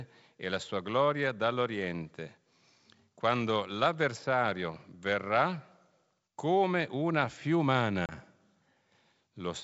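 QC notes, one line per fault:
8.06–8.13 s, packet loss on an ADPCM call: a hard-edged 30 ms silent hole, a few packets' worth. The decoder's predictor and step size then disagree with the sender's, so speech resumes slightly distorted. Unlike a clean dropout, it settles over tens of milliseconds.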